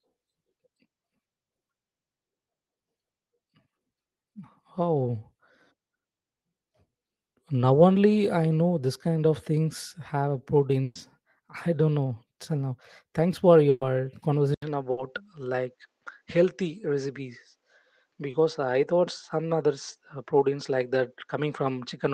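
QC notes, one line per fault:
10.83–10.97, 13.69–13.83, 14.91–14.99: burst of packet loss. The first two run about 140 ms each, the third about 80 ms. The receiver had nothing to play for 120 ms, 120 ms and 60 ms respectively, so it stretched the last sound forward and faded it, producing a held buzz or fading hiss. The first two end in about 10 ms of silence. Playback then resumes later in time, and the audio that fell inside each gap is simply gone.
14.54 to end: input switched to a poorer device. An 80 ms silence marks the change. Afterwards the audio sounds duller and narrower, with nothing above 8.3 kHz, even though the call path still carries up to 12 kHz. A new background noise floor sits roughly 55 dB under the signal, and loudness stays about the same. This is likely a change of microphone, or a drop to a headset's call profile, partway through the recording.
18.31–18.35: short concealed packet loss. 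About 20 ms of audio never reached the decoder in time. The receiver covered the hole by continuing the preceding sound, following its pitch if voiced or as shaped noise if not, and then crossfaded back into the real signal. The result is a brief smear or wobble at that point, and a very short sound landing in that window may be lost.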